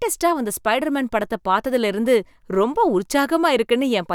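No technical faults can be heard in this speech.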